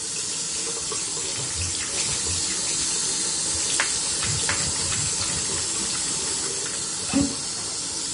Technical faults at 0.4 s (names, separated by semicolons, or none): Vorbis compression